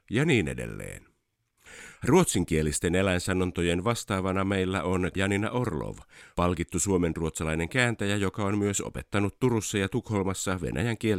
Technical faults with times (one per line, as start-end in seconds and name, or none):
none